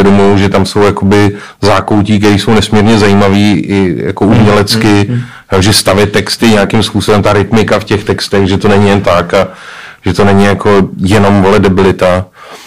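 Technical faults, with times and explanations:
Throughout: hard clipping. The speech drives the signal about 18 dB beyond what the chain can pass, so its waveform peaks are sliced flat, and roughly 15% of all samples were cut off at the chain's limit. Those squared-off tops generate a dense spread of high harmonics that were never in the original sound, so every loud syllable turns into a harsh, buzzy fuzz rather than occasional crackle.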